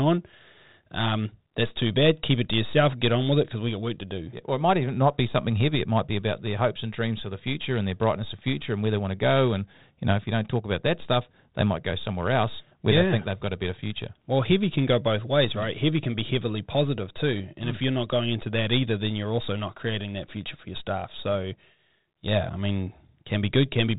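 No technical faults are audible.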